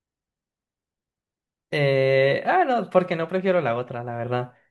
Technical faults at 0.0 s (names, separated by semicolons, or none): none